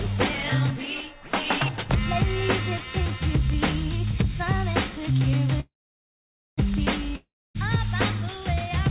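At 5.6 to 6.6 s, a call audio freeze: sound buzzes briefly, then falls silent for about 0.87 s, likely from held-up packets. Audio resumes where it stopped, with nothing lost. At 7.16 to 7.57 s, a long network dropout: after a short fading buzz, about 0.27 s of silence, then the sound resumes further on, skipping roughly 0.4 s.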